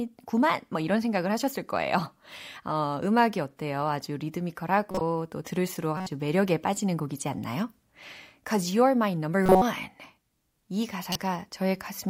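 At 4.91 to 5.01 s, 5.97 to 6.07 s, 9.43 to 9.62 s and 11.12 to 11.16 s the speech is broken by short chirps and noise bursts, the mark of a corrupt frame decoded: damaged frames were played as if valid, so misread gains and codes put energy at the wrong frequencies. The 9.43 s burst is longest and loudest, peaking near -5 dBFS and spanning several frames; the others peak around -15 to -20 dBFS. Unlike a lost frame, there is no smeared repeat, just foreign tonal junk.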